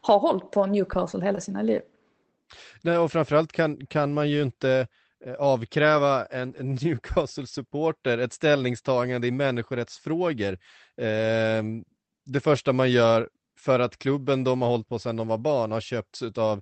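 At 1.35 to 1.39 s, just before "sina liv", a short concealed packet loss occurs: about 20 ms of speech never arrived in time. The decoder extended the preceding sound for about 14 ms before blending back, producing a brief smear or wobble.

Overlapping its tail, 1.37 to 1.39 s carries a lost packet rebuilt from error correction. The following packet's low-bitrate copy of the 20 ms frame was decoded, so there's no gap, only a rougher, noisier patch. The same happens over a longer 80 ms stretch at 6.45 to 6.59 s, again at 12.55 s before "man gör för att", and at 15.37 s, each 20 ms. The speech band tops out near 8 kHz, consistent with an Opus call link.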